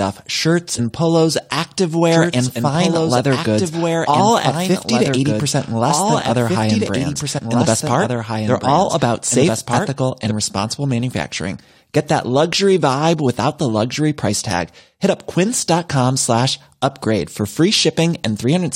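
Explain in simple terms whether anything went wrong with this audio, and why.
Yes, two things went wrong.

At 0.78 s, and again from 7.37 to 7.39 s, there is a tiny chirp or blip. This is damaged data in a compressed stream: a few bytes of the compressed file were broken, so the player couldn't read that bit. It lost its place, searched for the next piece it could read, and made that brief squawk in between.

From 2.12 s to 10.31 s, a second, quieter copy of the speech runs about two seconds behind the first, so every phrase is heard again on top of what follows. It starts and stops suddenly rather than fading like an echo in a room, and it starts just before "responsible manufacturing". This is a doubled audio track. The likely cause is that the same audio got mixed in twice, with one copy delayed.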